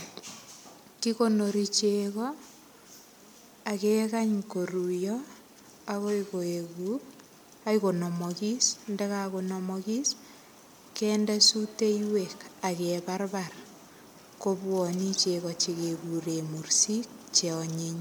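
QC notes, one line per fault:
Throughout: generation loss. The speech sounds swirly, smeared and hollow, with blurred attacks, though content reaches 20.1 kHz. This is too much damage for one encode, and likely comes from about five MP3 passes near 128 kbit/s, each requantising on a shifted frame grid.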